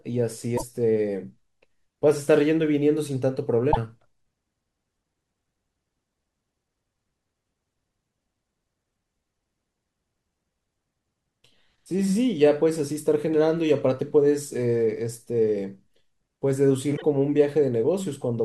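A broken MP3 bit reservoir shows up at 0.57 to 0.63 s, 3.71 to 3.77 s and 16.96 to 17.02 s: each time the speech skips ahead and about 64 ms comes out garbled. Likely cause: frames went missing, and the next frames, at 24 ms each, decoded borrowed bits from the wrong frame.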